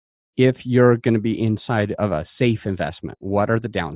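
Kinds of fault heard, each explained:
No technical faults heard.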